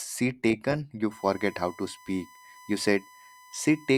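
A speech recording with USB whine. At 1.11 s a steady tone at 1 kHz appears and stays until the end of the clip. It sits roughly 25 dB below the speech and does not move in pitch. The fixed 1 kHz pitch matches the 1 ms frame rate of the USB bus. Current drawn in those frames leaks into the audio path through the power or ground lines.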